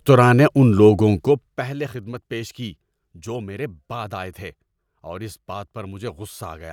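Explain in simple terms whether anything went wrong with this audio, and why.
Nothing went wrong here; the recording sounds as intended.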